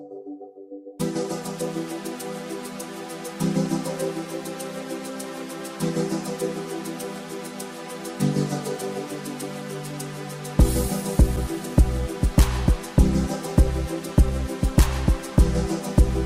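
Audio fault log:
No faults can be heard anywhere in the clip. The audio gives nothing to log against any time.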